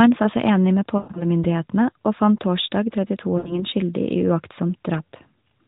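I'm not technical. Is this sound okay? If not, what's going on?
No. Twice the phone signal dropped bits of speech, called lost AMR speech frames. After "sa seg enig med", around 0.98 to 1.26 s, the voice smears, fades briefly, then returns rough. After "og fant torsdag", around 3.38 to 3.64 s, a shorter gap briefly disturbs the voice. The phone decoder filled these gaps by stretching the last good sound.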